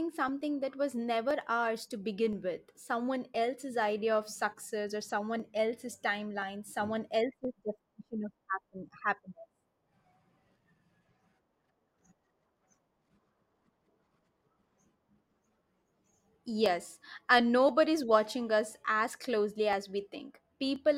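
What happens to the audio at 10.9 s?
At 10.9 s the speech sits inside a run of periodic USB or driver dropouts lasting from 0.28 s to 20.76 s. Every 1.02 s a blocked bus skips roughly half a millisecond of audio, leaving a tick. The strict, unvarying spacing sets it apart from random network packet loss.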